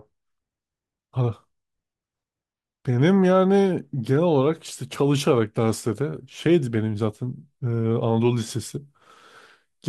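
No technical faults are audible.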